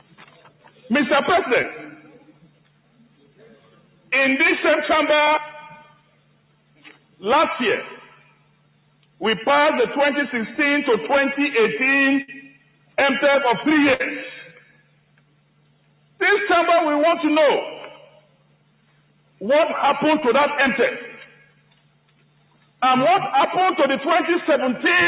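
Held tones and tails keep sinking and swelling back through the whole clip, a pumping, thinned-out sound with level swings of roughly 10 dB, because a noise suppressor built for speech was applied to music or general sound and treats steady tones, ambience and decay as noise. It bites hardest as sound cut by the noise suppressor, dropping by up to about 12 dB and clipping decays short at 0.0–0.87 s, 1.96–4.12 s, 5.82–7.23 s, 8.05–9.21 s, 12.42–12.97 s, 14.53–16.2 s, 18.06–19.41 s and 21.27–22.82 s, while sharp onsets mostly pass intact. Brief smeared wobbles at 1.62–1.66 s and 20.2–20.24 s are short concealed packet loss: about 20 ms of audio never arrived, and the receiver bridged the hole by extending the preceding sound before blending back into the real signal. At 12.22–12.3 s and 13.94–14.02 s the sound freezes into a held, fading buzz or hiss, then resumes further along. These are bursts of packet loss, where about 60 ms went missing and the concealment could only stretch and fade the last sound across the gap. 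The dull, band-limited tone with nothing above 4 kHz points to a narrowband G.711 A-law call path at 64 kbps.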